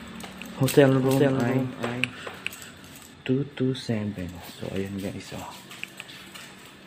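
From the start until 3.14 s a doubled audio track is already under way: a second, full-band copy of the sound trails the original by roughly 400 ms at about 5 dB lower, then cuts off abruptly. It is likely a second, slower capture path mixed back in. The echo has no decay or room tone. On a spectrogram every event appears twice, the fainter twin shifted right by a constant gap, and the waveform shows matching repeated envelopes.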